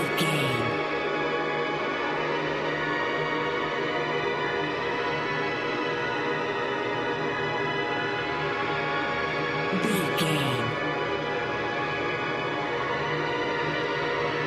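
No technical faults can be heard anywhere in the audio, so there are none to describe in time order.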